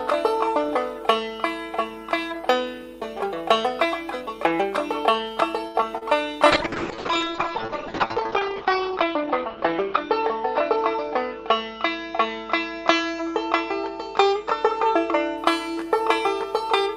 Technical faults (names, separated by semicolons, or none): short stall from a late packet; short concealed packet loss; call bitrate drop; jitter buffer speed-up